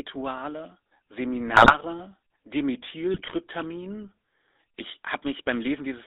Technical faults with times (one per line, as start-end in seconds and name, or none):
0.00-6.06 GSM full-rate codec
1.48-1.76 GSM bit errors
3.14-3.35 GSM bit errors